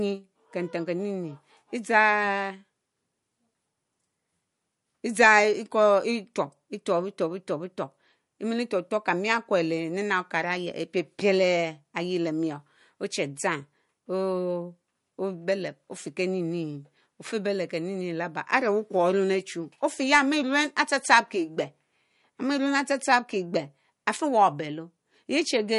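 Throughout the speech, the encoder has likely run short of bits under MP3 compression, which fits a bitrate near 48 kbps. It cuts everything above 11.2 kHz and drops weak frequency lines frame to frame, leaving a dull top, a watery swirl and metallic chirps on s sounds.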